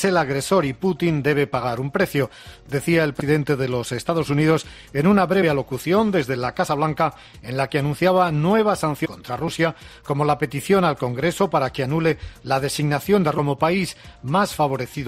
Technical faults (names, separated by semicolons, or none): damaged data in a compressed stream